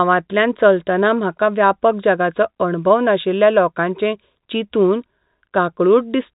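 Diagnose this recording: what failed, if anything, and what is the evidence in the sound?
Nothing stood out on listening to this speech recording, and no stage of the chain shows a failure that can be heard.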